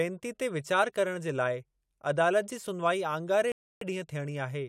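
At 3.52 s there's a rebuffering stall: playback runs dry, sits silent until 3.81 s, then picks up exactly where it left off, adding about 0.3 s.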